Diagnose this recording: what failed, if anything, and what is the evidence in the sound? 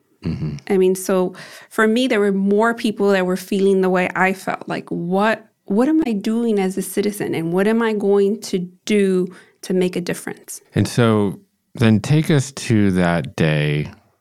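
Damaged data in a compressed stream, from 6.02 to 6.07 s, just before "doing as a citizen". The failure sits at the codec stage, in the encoded file or stream rather than in the analogue or playback path. A brief glitch of roughly 44 ms cuts across the speech. Corrupted bytes in the compressed frames there make the decoder misread them and lose sync. It emits garbled output or silence until it locks onto the next valid frame header.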